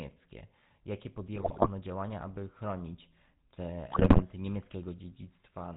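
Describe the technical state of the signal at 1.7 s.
At 1.7 s the sound is just leaving a burst of GSM bit errors that runs from 1.34 to 1.70 s. Corrupted filter, pitch and gain values reach the decoder. The spectrum bends and the level jumps from frame to frame. The result is squawks, pops and gargling.

Underneath, the whole clip carries the GSM full-rate codec, which fits the 13 kbps GSM coder. Its excitation is a thinned pulse train driving a vocal-tract model. Nothing above 4 kHz survives. The speech sounds buzzy and gravelly, with plainly audible damage.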